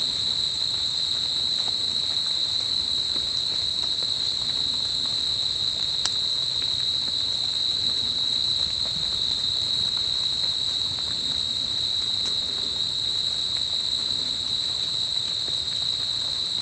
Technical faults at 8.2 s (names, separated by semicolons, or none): none